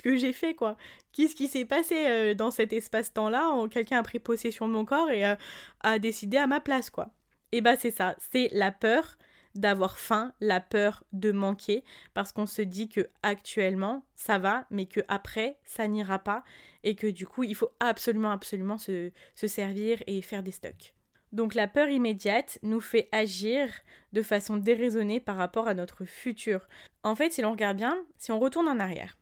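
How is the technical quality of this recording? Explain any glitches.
Nothing in the recording stood out as a technical problem on listening.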